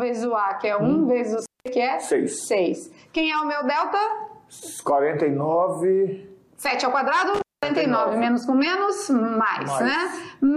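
Around 1.42 to 1.68 s, and again from 7.34 to 7.66 s, there's an intermittent contact: a loose plug or cable briefly opening. The sound drops out for roughly 0.2 s each time, with crackle at both edges and faint hiss in the gap.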